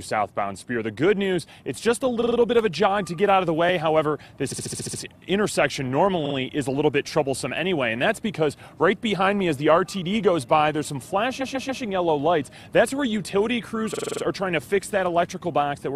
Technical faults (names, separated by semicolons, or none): repeated frames